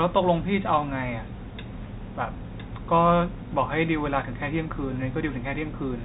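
Nothing goes wrong here; the speech comes across with the narrow, boxy band of G.711 telephone coding, with nothing above about 3.8 kHz, and no faults turn up anywhere.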